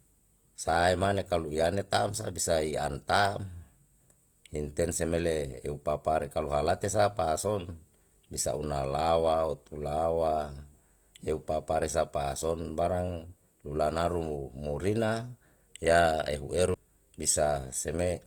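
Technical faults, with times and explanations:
throughout, Opus compression: the speech sounds grainy and rough, its band energy kept but filled with noise, likely Opus in music mode at around 24 kbps.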